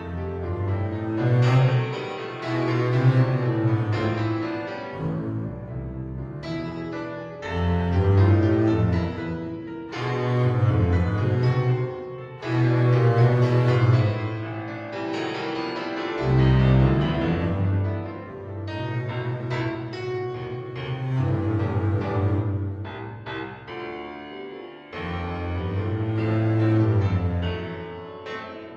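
No technical faults are audible.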